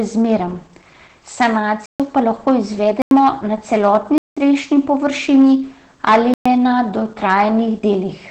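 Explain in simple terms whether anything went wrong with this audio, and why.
A few things went wrong, and they stack on top of each other.

First, the whole clip has been squeezed through Opus voice compression at a very low setting. To save space, the codec throws away the upper part of the sound and rebuilds the voice from a rough model. So the speech sounds dull and muffled, a bit hoarse, with a faintly robotic edge from start to finish.

Second, there are four blocks of digital silence, where the sound drops out to silence and then snaps back. They land at 1.86 to 2.00 s, 3.02 to 3.11 s, 4.18 to 4.37 s and 6.34 to 6.46 s, each roughly a tenth to a fifth of a second long. This most likely happens when the playback or recording software can't deliver the next chunk of audio in time, so a stretch of zeros gets filled in instead. Because the cut is instant, with no fade, you hear a short hole in the sound.

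Third, there's hard clipping in three stretches: 2.17 to 3.28 s, 3.73 to 5.53 s, and 6.07 to 6.81 s, the last one being the worst. The signal got louder than something in the chain could handle, so the tops of the waveform were sliced flat. That puts crackle on the loud peaks. Several of the silent holes fall right inside these distorted stretches.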